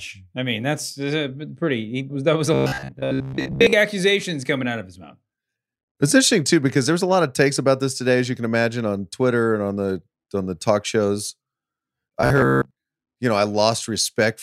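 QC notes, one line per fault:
2.54–3.73 s and 12.21–12.71 s, robotic sound from repeated short buffers: a rigid 66.7 Hz metallic buzz, ending before "accusations coming out of" and "you know I". The likely cause is a 15 ms chunk looping in place of most fresh audio. Unlike a pitch shift, the drone stays fixed regardless of the voice.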